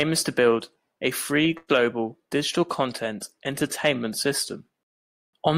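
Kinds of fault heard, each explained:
Call audio freeze: The likely cause is packets held up in transit long enough for the receiver's jitter buffer to run dry. From 1.57 to 1.70 s the sound stops progressing: about 110 ms is filled by the last sound carried on as a fading buzz or hiss, then roughly 20 ms of silence. When the audio resumes it picks up where it left off, with nothing lost, but everything after now arrives about 110 ms later.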